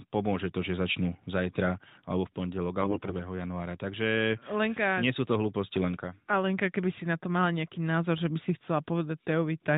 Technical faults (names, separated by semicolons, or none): AMR bit errors